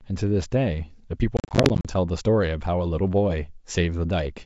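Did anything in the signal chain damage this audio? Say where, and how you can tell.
Yes, at the network stage: packet loss on an ADPCM call between 1.37 and 1.86 s, while the G.722 coding at 64 kbit/s carries the wideband speech cleanly. About 230 ms of audio drops out across those 480 ms, roughly twenty packets lost in short, hard-edged silent holes, none longer than 40 ms. After each hole the decoder's adaptive predictor and step size no longer match the sender's, so the speech returns slightly distorted before it settles. A buffer underrun would leave gaps without that mistracking on recovery.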